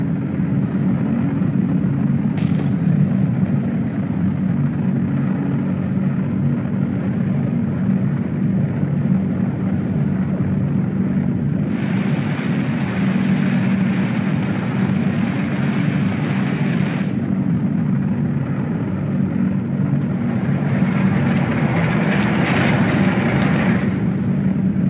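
No faults can be heard anywhere in this recording.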